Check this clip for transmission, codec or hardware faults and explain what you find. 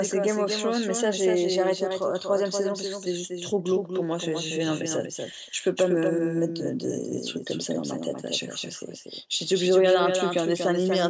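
Three faults are audible in this speech clip.

Doubled audio track, throughout: a second, slower capture path or an out-of-step edit is the likely cause. A full-band copy trails by roughly 200 ms, about 5 dB quieter, with no room colour.

Background gated by the echo canceller, 5.52 to 5.64 s: the canceller clamped the microphone while the loudspeaker played. The room sound drops by about 40 dB for roughly a tenth of a second.

Echo leak, 6.06 to 6.10 s and 9.33 to 9.37 s: residual loudspeaker pickup that the far end's canceller missed is the likely cause. Brief scraps of the voice return 257 ms late, about 25 dB down in the first and about 40 dB down in the second. The call's microphone processing, which passes nothing above 8 kHz, sets the clip's bandwidth.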